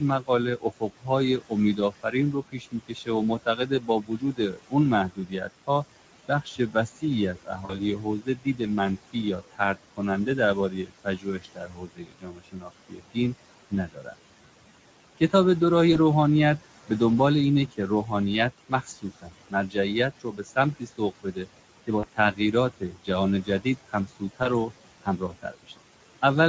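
Throughout the speech, noise suppressor artifacts are present. The room noise, about 16 dB below the voice, is pulled down by about 18 dB between phrases and rises back under them. The Speex codec damage is also plainly audible for the whole clip. Its sound fits a Speex wideband setting near 16.8 kbps, where too few bits for the excitation make the voice hoarse and grainy. Content stops at 8 kHz, and the upper band sounds like shaped noise rather than real detail.

Speech cut by the noise suppressor recurs across five stretches: 0.0–5.69 s, 6.28–13.17 s, 13.7–14.14 s, 17.68–18.12 s and 18.69–26.23 s. Within these, soft consonants and word endings are mistaken for noise and dropped by up to about 19 dB (about 14 dB at 17.68 s), so they sound swallowed. A few seconds are affected in each long stretch.

VoIP packet loss concealed by the speech codec occurs at 7.65–7.79 s (40 ms lost), 15.93–15.97 s (20 ms), 21.99–22.05 s (40 ms) and 24.43–24.48 s (20 ms). 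Each time the decoder stretches the last pitch and filter into a brief sound that fades, and the voice stays weakened for a moment afterwards.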